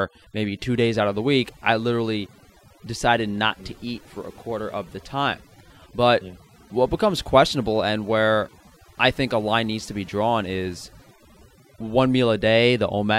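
Throughout, the speech sits over a near-silent background dotted with twinkling specks: overdone noise removal, pulling frequency bands near the estimated noise floor down or out entirely.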